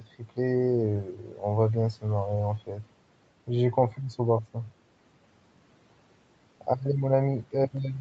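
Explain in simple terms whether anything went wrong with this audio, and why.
At 0.00–0.38 s, 1.04–1.42 s and 2.59–2.86 s, speech cut by the noise suppressor makes parts of the speech go faint, because the suppressor mistook them for background noise. Unlike a dropout, the sound dips and softens briefly rather than vanishing abruptly.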